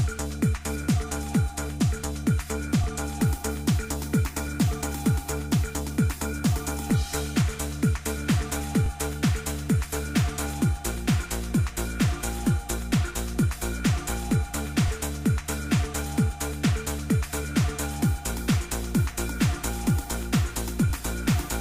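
The audio was handled in overlapping chunks, each starting about 21 ms before the previous one ended. That slice plays twice at every 6-second join, at 2.84, 8.86, 14.88 and 20.90 s, giving a brief stutter or click each time.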